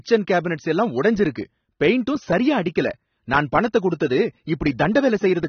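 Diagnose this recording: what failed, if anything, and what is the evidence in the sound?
The codec stage failed, across the whole speech recording. Nothing reaches above 6.3 kHz, and what remains sounds dull and smeared, with a warbling, fizzy texture on sustained vowels and sibilants. This is likely AAC compression, with AAC-LC running short of bits and consistent with a rate near 27 kbps. The encoder lowers its bandwidth and quantises the frequency lines coarsely. A plain low-pass filter would dull the sound cleanly, without that swirling texture.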